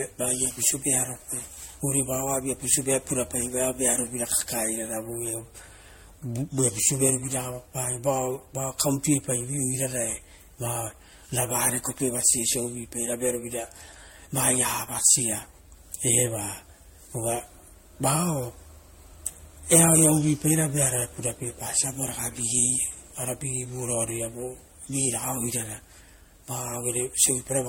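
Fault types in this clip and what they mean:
Generation loss: the speech sounds swirly, hollow and smeared, with blurred attacks and nothing above 16.6 kHz. That is worse than a single MP3 pass at about 64 kbit/s would leave, likely from repeated re-encoding, roughly seven passes, each adding fresh artefacts.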